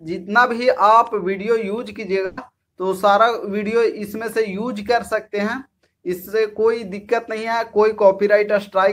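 At 2.25 to 2.39 s, a burst of packet loss drops 120 ms. The prior sound is held and fades, leaving a smeared, tapering spectrogram band.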